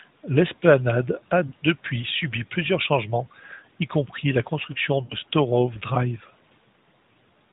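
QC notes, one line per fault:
1.48–1.54 s and 5.04–5.15 s, lost AMR speech frames: two short dropouts, about 40 ms then 60 ms. The narrowband AMR decoder covers each gap by repeating its last good pitch and vocal-tract settings at falling gain, so you hear a brief smeared, warbly dip before the speech picks back up, weak for a moment.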